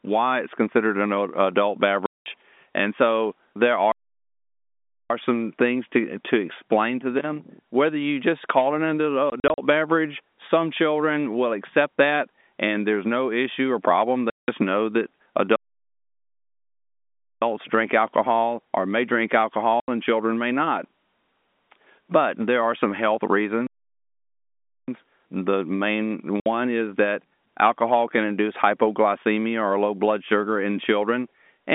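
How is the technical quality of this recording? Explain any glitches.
The speech comes through a telephone-band line, G.711 A-law with content held to roughly 200 Hz to 3.6 kHz, and it is broken up by two kinds of dropout: short packet-loss holes and longer playback stalls.

Packet loss filled with silence occurs at 2.06–2.26 s (200 ms), 9.3–9.58 s (120 ms lost in bursts of up to 40 ms), 14.3–14.48 s (180 ms), 19.8–19.88 s (80 ms) and 26.4–26.46 s (60 ms). The gap lengths fit 20 ms packets that never arrived and were replaced with silence. On the waveform these show as flat, hard-edged cut-outs, and on the spectrogram as blank vertical strips.

Playback stalls interrupt the speech at 3.92–5.10 s (1.18 s), 15.56–17.42 s (1.86 s) and 23.67–24.88 s (1.21 s). Each one silences the speech mid-flow for over a second, likely because the player's buffer ran dry. The waveform goes flat for these long stretches, and the spectrogram shows wide empty bands across all frequencies.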